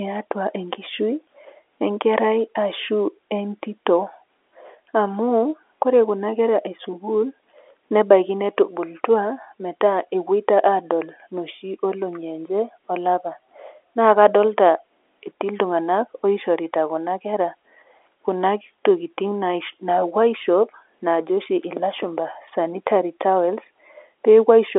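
No technical faults occur at any point in the clip, and the speech comes through the telephone band with nothing above about 3.7 kHz, as an ordinary phone line would carry it.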